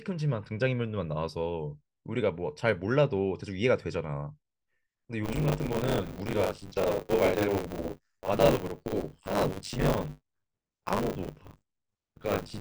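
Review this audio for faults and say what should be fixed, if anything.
Buffer tearing starts at 5.23 s and runs to the end. A robotic buzz at 100 Hz rides on the speech, which fits a 10 ms buffer period. In each period, roughly 40 percent holds stale audio, around 40 ms old, joined hard on both sides. Keep the writer clearly ahead of the hardware read position, with adequate buffering and proper underrun recovery.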